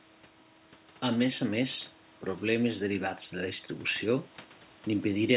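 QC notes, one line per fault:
No faults detected.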